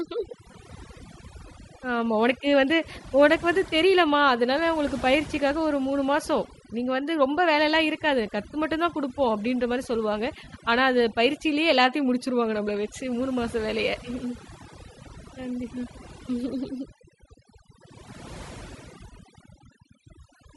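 Throughout, the background drops and breaks up into twinkling specks: overdone noise removal, pulling frequency bands down along with quiet speech detail. The speech also carries a plainly audible breathy, grainy edge with a dulled top end, likely from Bluetooth LC3 compression discarding upper frequencies and filling them with noise, at a rate that suggests around 48 kbps. From 10.45 to 10.47 s the sound briefly smears into noise. That is lost LE Audio frames, with the decoder repeating the previous spectrum with scrambled phases across a gap of roughly two 10 ms frames.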